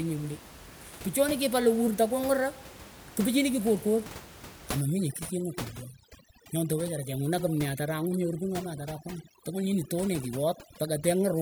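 From 4.81 s to the end at 11.42 s, overdone noise removal takes hold. Before that, room noise sits about 17 dB below the speech. Here the suppressor cuts every frequency band it judges close to that noise floor, so the gaps fall to near silence dotted with twinkling specks. The speech's quieter components are stripped along with the noise. A spectrogram shows scattered isolated bright dots in blacked-out background, and a waveform shows abruptly flattened pauses.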